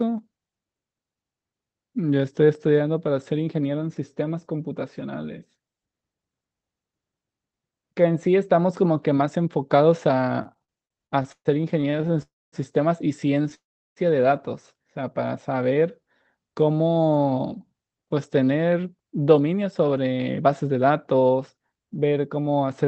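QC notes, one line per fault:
10.43–12.21 s, repeated stalls (stutter): sixteen short hold-ups, longest 129 ms, stretch this span by 430 ms. Late packets kept emptying the buffer, so the sound drags and stutters.
12.22–12.55 s and 13.54–13.99 s, call audio freeze: the sound halts for about 0.3 s, then 0.42 s, mostly silent. Packets were likely held up; playback resumes where it stopped.
15.54–16.02 s, jitter buffer slow-down: about 63 ms of repeated pitch periods play this stretch at 88% speed. Pitch holds, but sounds draw out.
17.52–22.85 s, jitter buffer speed-up: short pieces, around half a second in total, are cut to play at 110% speed. Pitch stays, delivery sounds hurried.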